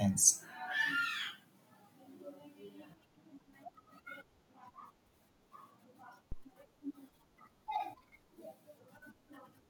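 A phantom power thump lands at 6.32 s in this speech clip, running to about 6.48 s. A supply voltage was switched on or off on a live input, and that sudden DC step passed through the coupling capacitors into the signal path. The result is a single deep, low-frequency thud peaking at about -30 dBFS, which dies away quickly, with a decay of around 35 ms.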